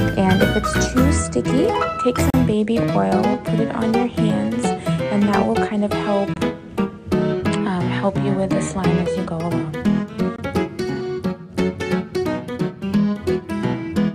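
At 2.30 s, 6.34 s and 10.36 s, about 4 s apart, the sound drops out briefly: a gap at a join of encoded pieces. The first lasts about 36 ms and the other two about 23 ms. Each piece was encoded on its own and butted together untrimmed, so encoder start-up silence and last-frame padding remain at every seam. The dropouts have smeared edges, and the sound resumes exactly where it stopped.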